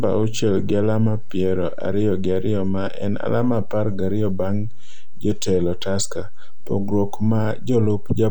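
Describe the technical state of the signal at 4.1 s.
DC offset is present at 4.1 s, as it is across the entire speech clip. The waveform sits on a constant shift of about -20 dBFS rather than swinging around zero, so every sample is pushed the same distance in one direction. This can't be heard as a tone or noise. It shows up as steady energy at 0 Hz, the very bottom of the spectrum, and it eats headroom, leaving the peaks on one side closer to clipping.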